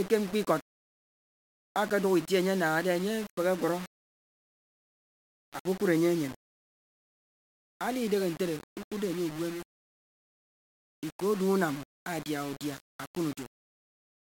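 From start to end, the speech is gritty and grainy. This is likely low bit depth without dither: only about 5 bits, plainly rounded. The error tracks the signal, with noise roughly 20 dB below it. Quiet stretches break up, sputtering or dropping to silence.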